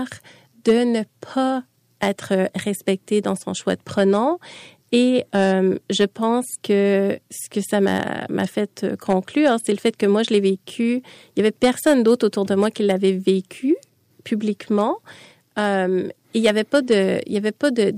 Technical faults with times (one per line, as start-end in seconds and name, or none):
0.00-17.97 hard clipping